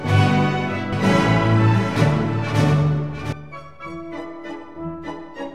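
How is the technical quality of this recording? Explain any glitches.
One glitch stands out. From 0.93 to 3.33 s a doubled audio track appears: a full-band copy trails roughly 0.7 s behind, about 10 dB quieter, likely from a second capture path. It sounds like a dry, undecayed echo and shows as repeated, fainter waveform and spectrogram shapes that start and stop abruptly.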